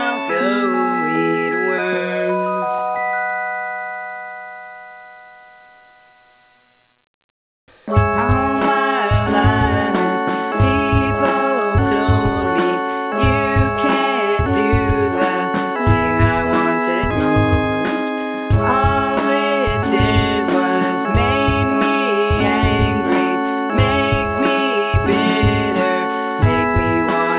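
No faults are audible; the band ends at 4 kHz, which points to a narrowband G.711 mu-law call path working as intended.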